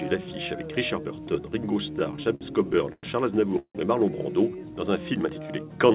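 Repeated stalls (stutter) run from 1.92 to 3.05 s: twelve short hangs, the longest 102 ms, adding 268 ms in total, as late packets repeatedly emptied the jitter buffer and the last sound was stretched to cover each wait, so nothing is lost but the audio drags. A call audio freeze follows at 3.59 to 3.77 s, a 158 ms hold whose last 80 ms fall silent, likely from packets held up in transit; the audio then resumes where it stopped. Throughout, the band stops at 4 kHz, which points to a narrowband call codec such as G.711.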